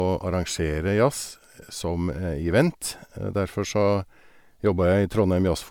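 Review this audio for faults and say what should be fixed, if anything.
Generation loss runs through the whole clip: the speech was likely decoded and re-encoded as MP3 around five times, with nothing above 19.9 kHz, which fits 128 kbit/s. Each pass requantises on a shifted frame grid, leaving swirly, hollow, smeared sound with blurred attacks. Keep a lossless master and encode to MP3 only once, at final delivery.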